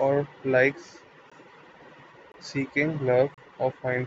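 Brief hard-edged dropouts cut into the speech at 1.30 s, 2.32 to 2.34 s and 3.34 to 3.38 s, roughly once a second. These are gaps between stream segments: timestamps on consecutive 1-second segments don't meet, so the player inserts 16 to 34 ms of silence, losing no audio.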